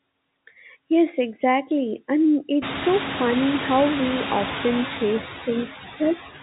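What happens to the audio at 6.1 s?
Right there the noise suppressor is cutting speech. From 5.89 to 6.19 s it mistakes part of the talking for noise and pulls it down by up to about 13 dB, so the tail sounds swallowed, with roughly 150 ms of it faint. Underneath, the suppressor's usual artifacts are still running, knocking the background down by about 12 dB, so the noise sinks between words and rises under them.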